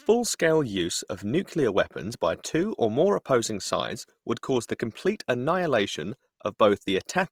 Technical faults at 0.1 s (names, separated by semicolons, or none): Opus compression